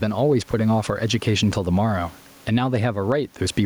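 A speech recording with gain pumping throughout: the background noise sits about 38 dB below the speech, and the gain swings by around 15 dB. The likely cause is input gain set far too high, with a fast limiter clamping each peak.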